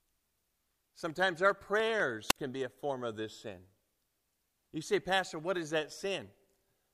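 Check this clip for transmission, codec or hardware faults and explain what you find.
One fault appears in the speech. From 2.28 to 2.36 s, a wireless microphone squelch dropout: a fading FM signal brings brief hiss, then the receiver's squelch mutes 52 ms of audio.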